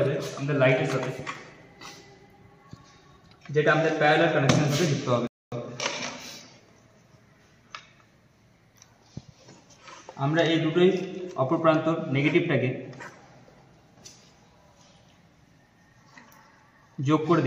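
At 5.27 s a rebuffering stall cuts in: playback starved, went silent until 5.52 s, then resumed exactly where it stopped, adding about 0.25 s but losing nothing, unlike a dropout.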